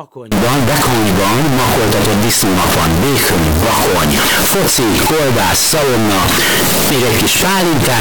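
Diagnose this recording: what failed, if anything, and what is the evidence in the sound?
The failure sits at the sample-format conversion stage: float read as integer. From 0.32 s to the end, the speech turns into a loud, harsh, nearly square waveform at an almost fixed, high level. Background noise comes up to the same level as the talker, yet the pitch contour still carries through. The likely cause is 32-bit float samples being interpreted as 32-bit integers, so the sign and exponent bits dominate each value instead of the true amplitude.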